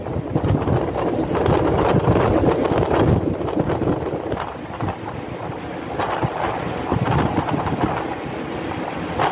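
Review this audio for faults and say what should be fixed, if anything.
Gain pumping runs throughout: the level swings by around 5 dB, likely from input gain set far too high, with a fast limiter or compressor pulling it down on each loud sound. The call path cuts everything above 4 kHz, which fits G.711 mu-law at 64 kbps. To prevent the pumping, lower the microphone gain at the source so the limiter rarely has to act.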